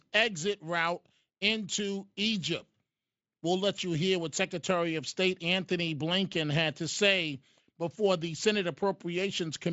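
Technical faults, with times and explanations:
No technical faults are present in the speech, so there are no times or explanations to give.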